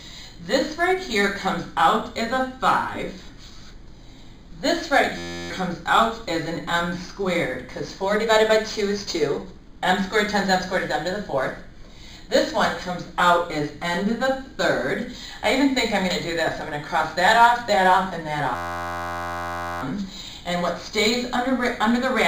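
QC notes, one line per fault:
5.18–5.50 s and 18.55–19.82 s: system hang loop. The system stalled while playback kept cycling one 11.6 ms buffer, which fits a 512-sample buffer, so a steady buzz at about 86.1 Hz replaces roughly 0.3 s, then about 1.5 s, of audio.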